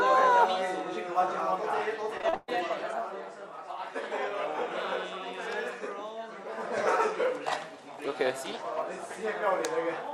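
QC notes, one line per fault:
2.17–2.50 s, repeated packet loss (robotic sound). The audio breaks up into what sounds like four closely spaced dropouts within a third of a second. About 63 percent of the span is patched rather than real. Each hole is filled by extending the last received sound, which gives the choppy, robotic texture. The longest gap runs 131 ms. About 203 ms is filled in, and 220 ms of the original sound is missing.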